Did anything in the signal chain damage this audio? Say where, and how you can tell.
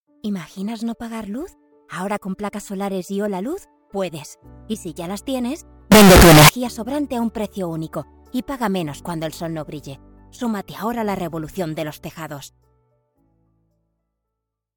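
Yes. From 5.92 to 6.49 s the sound turns suddenly very loud and harsh, nearly square-edged at an almost fixed, high level, with background noise as loud as everything else. This is likely a float read as integer at sample-format conversion: 32-bit float samples taken as 32-bit integers.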